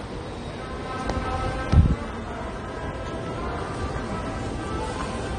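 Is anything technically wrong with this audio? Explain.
Yes. Transcoding between lossy codecs runs throughout: nothing remains above 10 kHz, and two kinds of artefact can be heard at once. This likely comes from an MP3-like encode re-encoded as AAC-LC at a low rate, around 32 kbit/s, so the second codec wastes bits on the first codec's smearing.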